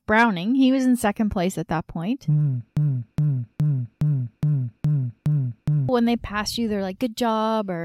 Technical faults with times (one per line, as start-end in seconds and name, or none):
2.77-5.89 broken-record loop